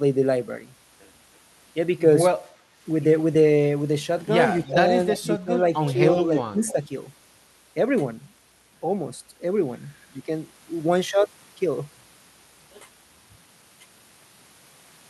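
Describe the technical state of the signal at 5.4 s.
At 5.4 s the speech is still within a stretch of speech suppressed in double talk, running from 4.66 to 5.53 s. The level dips in patches, by up to about 15 dB, for around a third of a second in all. An echo canceller likely turned down this talker while both sides spoke.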